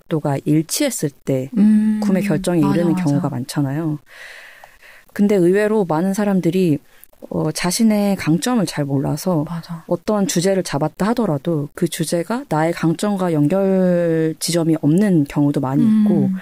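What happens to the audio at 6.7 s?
The speech was likely truncated to 8 bits without dither, so at 6.7 s, as throughout, rounding error tracks the signal as grainy distortion about 40 dB down, gritty in quieter passages.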